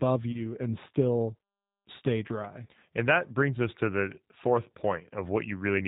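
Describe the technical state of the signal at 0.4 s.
At 0.4 s the signal is inside a stretch of VoIP packet loss concealed by the speech codec, running from 0.32 to 0.46 s, just before "and still stay dry". About 20 ms of audio is missing, which points to a single lost packet. The decoder fills the gap by extrapolating its last pitch and filter state at falling gain, which stretches the sound into a brief fading fill. Because each frame depends on the previous one, the speech stays weakened and distorted past the gap itself.

Across the whole clip, including this point, the speech is carried by the G.729 codec (the G.729A variant) at 8 kbit/s. Nothing above 4 kHz survives, so the sound is band-limited. Coding artefacts are plainly audible as a rough, slightly synthetic quality from rebuilding the speech out of a vocal tract filter, a pitch predictor and sparse pulses.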